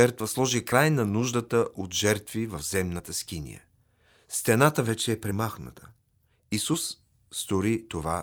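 No technical faults can be heard in this speech recording, so there are none to describe in time order.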